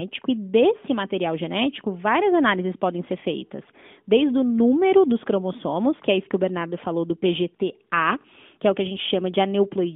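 Nothing's amiss here: it's a speech recording, and there's no technical fault anywhere in it worth pointing out.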